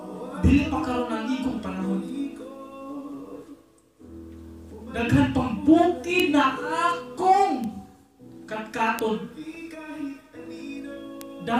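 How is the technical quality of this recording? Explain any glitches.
The recording is marred by four isolated bit error spikes, at 6.20, 7.64, 8.99 and 11.21 s. Each is a single corrupted sample where a flipped bit throws the value far off by a power of two before it snaps back, peaking at about -2, -14, -2 and -8 dBFS. The result is a bare, broadband tick with no relation to the surrounding sound. Unlike a dropout click or an edit discontinuity, nothing goes missing and the waveform resumes exactly where it was.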